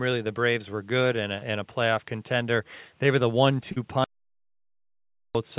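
At 1.38 s and again at 3.72 s there is short concealed packet loss. About 40 ms of the call arrived too late each time, and the receiver bridged it by extending the preceding sound before blending back, which leaves a brief smear in the band-limited speech that stops at 4 kHz. From 4.04 s to 5.35 s comes an audio dropout to silence. The signal vanishes for about 1.3 s into silence, with no room tone, likely because the input was lost while writing continued.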